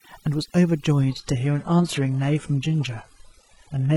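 From the first moment, this speech has overdone noise removal: the denoiser was pushed so hard that bands near its noise estimate get gated almost to nothing. The background falls to near silence sprinkled with twinkly specks.

At about 1.01 s the quality drops suddenly, with no gap, and stays down to the end. That's an adaptive stream at a lower bitrate. Nothing is left above 11.5 kHz and codec smearing rises, which fits a jump from a healthy AAC stream to a very lean HE-AAC one.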